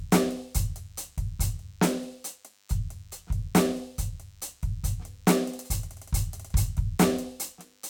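From start to finish, the music carries a DECT cordless phone buzz: a thin, steady rasp at 100 Hz, sitting roughly 35 dB below the music. A nearby DECT handset or base transmits a short radio burst every 10 ms, and the audio circuitry rectifies those bursts into sound. On a spectrogram it forms a comb of evenly spaced horizontal lines at 100 Hz and its many harmonics, while the waveform shows small regular spikes every 10 ms.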